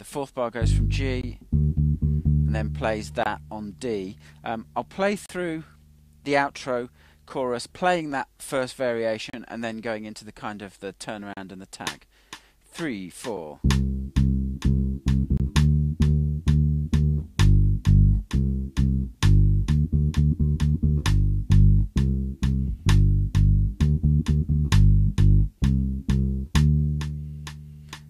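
Hard-edged silent holes at 1.21, 3.23, 5.26, 7.29, 9.30, 11.34 and 15.37 s are gaps between stream segments, spaced by the 2 s segment length. Unlike dropouts, no audio is lost: the sound resumes exactly where it stopped.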